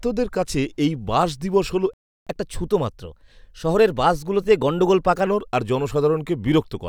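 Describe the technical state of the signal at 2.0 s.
At 2.0 s the speech is cut by a playback stall, silent from 1.94 to 2.27 s, right after "এই বাস দিবস হল". The player likely starved or blocked for 0.33 s.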